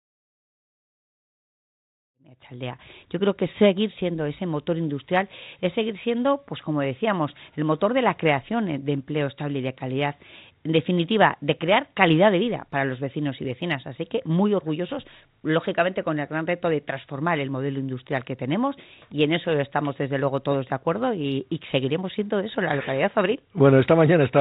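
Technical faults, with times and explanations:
Nothing here counts as a fault: the sound eases in gently from around 2 s and is at full level by 2.91 s, and the call path keeps everything below 4 kHz, which is simply what a telephone-style codec like G.711 A-law does.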